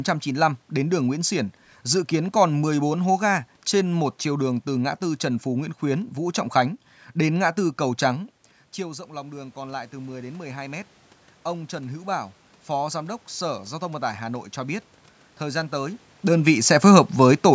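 Around 8 s the talker seems to drift back from the mic. From 8.76 to 13.28 s you hear automatic gain rising: the AGC sees the input drop by about 15 dB and slowly adds about 8 dB, so the voice and room noise swell up together.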